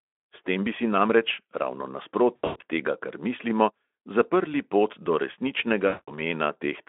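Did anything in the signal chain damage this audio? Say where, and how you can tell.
Yes. Network stage: VoIP packet loss concealed by the speech codec at 2.35–2.62 s and 5.87–6.18 s, about 200 ms lost each time. At the first, losses scatter over about 240 ms with runs up to 100 ms. The decoder extrapolates, so the speech turns into a buzzy tone or coloured noise that fades before "tega kar mislimo" recovers.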